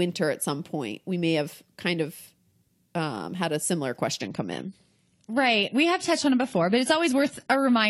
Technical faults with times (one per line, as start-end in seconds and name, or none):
4.21-7.90 adaptive stream at a lower bitrate